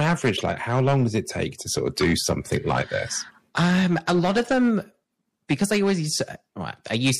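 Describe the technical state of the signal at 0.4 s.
Right at 0.4 s you're near the end of a short burst from a corrupt frame decoded, running from about 0.36 to 0.41 s. The decoder played damaged compressed data as if it were valid, so wrong gains and misread codes threw energy into the wrong frequencies for a couple of frames, roughly 50 ms. It comes through as a quick chirpy blip of noise, and it's fairly loud, peaking at around -10 dBFS.

Underneath that, the speech is hard clipped the whole way through. It's been pushed about 10 dB past what the chain can pass, so the peaks get sliced flat, and a few percent of the samples end up cut off at that limit. Those flat tops add harmonics high up the spectrum, so the louder parts carry a harsh, gritty fuzz rather than just the occasional crackle.

There's also plainly audible codec damage throughout, likely from MP3 compression at a rate that fits 64 kbps. 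With bits that scarce, weak frequency lines flicker on and off from frame to frame. You hear that as a watery, swirly texture with metallic chirps on the s sounds, and the attacks come out smeared.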